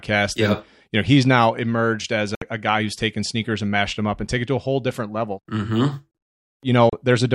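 After "he's now emerged as", at 2.35 to 2.42 s, a digital broadcast dropout mutes bad frames, leaving a 64 ms silent gap. A shorter 32 ms one follows at 6.90 to 6.93 s.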